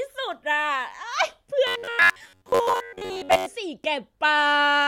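From 1.67 to 3.46 s the speech takes on robotic sound from repeated short buffers: a rigid metallic buzz near 94 Hz. The likely cause is starved playback looping roughly 10.7 ms segments, replacing most of the real audio while loosely tracking it.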